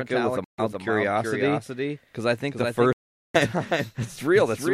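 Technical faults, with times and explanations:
Throughout: doubled audio track. A second full-band copy of the speech runs roughly 0.4 s behind the original, about 5 dB quieter. It has no decay or room colour. The likely cause is a slower capture path or an edit holding two copies out of step.
0.44–0.60 s and 2.93–3.36 s: Bluetooth dropout. The sound cuts to silence with abrupt edges, first after "with a", then after "because I think the". Speech resumes further on, as if it had played through the gaps. Packets likely missed their deadline to the headphones.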